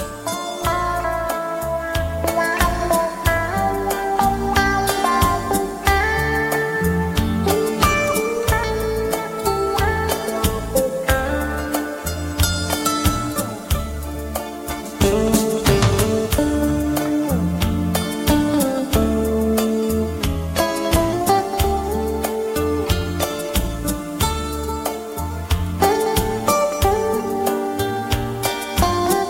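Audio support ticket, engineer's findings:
Drift correction step, 20.21 to 21.13 s. Playback slows by 5.75% and pitch drops about 103 cents, roughly a semitone, then snaps back to normal. Likely the clock-sync resampler applying a single-step rate change to rebalance its buffer instead of ramping gradually.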